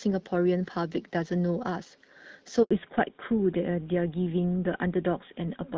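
A speech recording, carried over a phone call. At 2.63 s the sound cuts out for 80 ms, until 2.71 s. This is a handover gap. The call switched networks, and no speech frames arrived while the new link came up, so that stretch is simply lost. From 2.71 s to the end, there is a fallback to narrowband. Everything above 4 kHz disappears, and the sound turns duller and rougher. The clearer wideband quality of the first part fits HD Voice around 12.65 kbit/s. The thinner second part points to an older codec such as GSM full rate.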